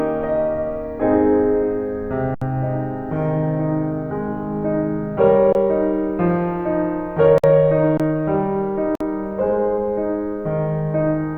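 A music recording with two kinds of dropout. The first is an underrun with held sample at 2.35–2.42 s (about 70 ms), 5.53–5.55 s and 7.97–8.00 s (about 23 ms each, which fits a 1024-sample buffer). The output buffer emptied and the converter held its last value. Music went missing during each gap, so the sound freezes and then resumes. On a waveform each gap is a flat line, and on a spectrogram it is a blank vertical strip. The second kind is two brief silences at 7.38–7.44 s (56 ms) and 8.95–9.01 s (53 ms), likely a Bluetooth stall in which delayed packets left the headphones' buffer dry. These show as silent gaps in the waveform and empty columns on the spectrogram.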